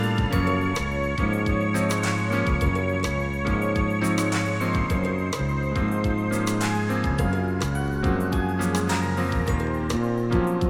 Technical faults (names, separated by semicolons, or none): none